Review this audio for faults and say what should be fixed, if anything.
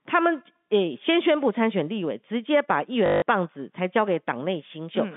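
Packet loss with last packet repeated occurs at 3.06 to 3.22 s and at 4.68 s. The replayed packets buzz, a pattern that fits 20 ms packets. Pitch-aware loss concealment, or forward error correction on the link, would replace this stutter.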